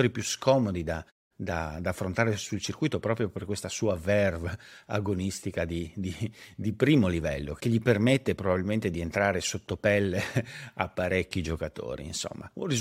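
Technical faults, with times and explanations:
Nothing technical stood out on listening to the speech.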